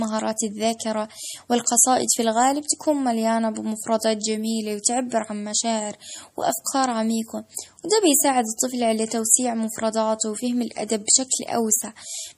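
Across the whole clip the speech carries plainly audible coding damage: a watery, swirling quality around the voice, with nothing above 15.3 kHz. The hard treble ceiling and the unstable texture fit MP3 compression, likely at a low rate near 40 kbps. Short of bits, the encoder discards content above a fixed frequency and zeroes weaker spectral lines, which then switch on and off between frames and smear the sound.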